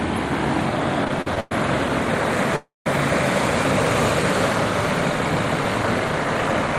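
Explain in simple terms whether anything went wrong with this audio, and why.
Repeated stalls (stutter) from 1.04 to 1.52 s: the sound catches and drags five times in quick succession, the longest hold about 0.11 s. The data carrying the sound kept arriving late, so the player repeatedly ran out of material and stretched the last bit of sound until more came. Roughly 41% of that half-second is this filler, but nothing is actually lost, just delayed.

Call audio freeze from 2.56 to 2.87 s: the sound hangs as a fading buzz for a moment, then drops to about 0.16 s of silence before picking up exactly where it left off. The likely cause is a single longer hold-up in delivery, with the player filling the wait of about 0.3 s. Nothing is missing afterwards, but everything from that point plays about 0.3 s later.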